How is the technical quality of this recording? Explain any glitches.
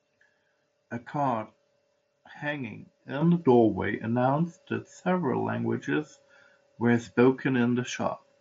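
The recording has one clear glitch: a microphone volume step-up at 3.21 s. The call software judged the input too quiet and raised the device's microphone gain in a single jump of about 7 dB rather than ramping it gradually. Because the change happens at the input, the speech and the background noise get louder together at that instant, producing an abrupt rise in level that stays for the rest of the clip. The audio also passes through a Bluetooth mSBC headset link, which limits it to nothing above 7.7 kHz and adds a light graininess on louder sounds.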